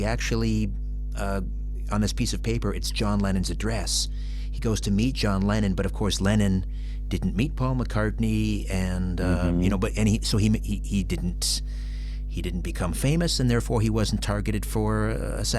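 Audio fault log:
Throughout: mains hum. A steady 50 Hz tone sits under the speech, loud, only a few dB below it. Power-line current is leaking into the signal path, most likely through a ground loop or a nearby transformer. It never varies, so it drones constantly.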